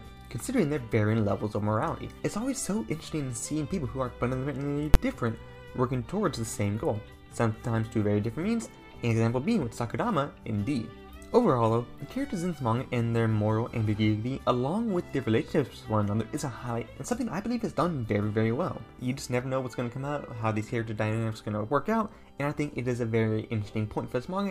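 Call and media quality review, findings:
Invalid numbers at full scale, 4.94 s: a single very loud bang. Probable component: a DSP stage whose calculation returned infinite or invalid values, forced to maximum amplitude. The duration fits a 512-sample processing block. Unlike a dropout click or clipping, it is a flat slam at one extreme value far beyond the audio's peaks, not a small glitch or flattened peaks.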